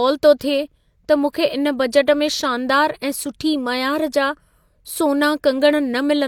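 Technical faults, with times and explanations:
0.39 s and 1.33 s, pre-echo: a hiss of about 19 and 16 ms creeps in just before sharp attacks, because the codec's block noise leaks ahead and softens them.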